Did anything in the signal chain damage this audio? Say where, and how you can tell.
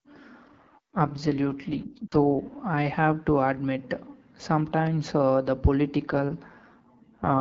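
Yes. AMR rate drop at the network and codec stage, 0.43–2.56 s and 6.06 s to the end. Bandwidth holds with no gaps, but the speech turns raspy as the link forces a cut that fits a drop from 12.65 to 6.6 kbit/s.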